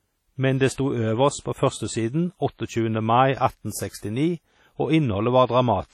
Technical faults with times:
0.00-5.94 WMA compression
0.73-0.78 pre-echo

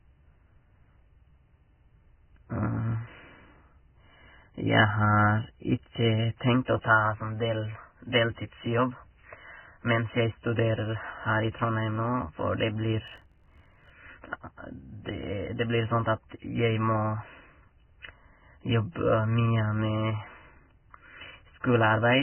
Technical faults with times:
0.00-22.23 Vorbis compression
13.06-13.90 block size mismatch (truncated)

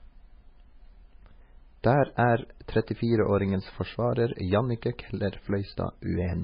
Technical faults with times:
0.00-6.43 MP3 compression

